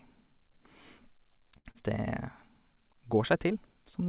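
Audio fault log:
1.58–1.82 s, short stall from a late packet: a packet arrived about 70 ms behind schedule, so the jitter buffer ran dry and the last sound was stretched for roughly 70 ms before playback resumed where it left off. Nothing is lost, but the held sound carries a faint buzz or dip.
1.71–1.76 s, short concealed packet loss: about 40 ms of audio never reached the decoder. The receiver bridged the gap with 34 ms synthesised from the preceding sound, then cross-faded into the real signal. This leaves a brief smear or wobble inside the stall.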